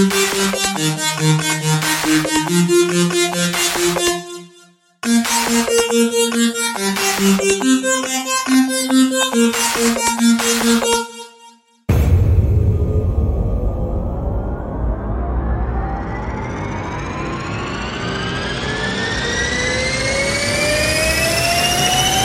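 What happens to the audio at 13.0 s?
Nothing goes wrong at 13.0 s; the audio plays through that moment intact, with no dropout, click or distortion.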